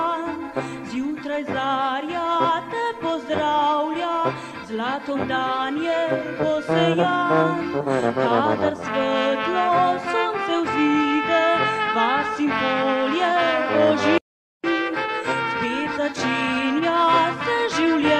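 No technical faults can be heard anywhere in this audio.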